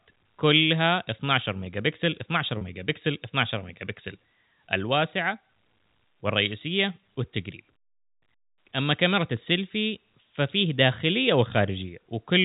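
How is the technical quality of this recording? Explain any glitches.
One brief glitch stands out in this speech, which comes through a telephone-band G.711 path with nothing above 4 kHz. At 2.58 to 2.61 s the sound holds for about 30 ms with a slightly buzzy, frozen quality, then carries on. That is packet loss with pitch repetition. The gap fits a single lost packet, and the receiver filled it by repeating the last pitch period, so it sounds like a short held tone rather than a silent dropout.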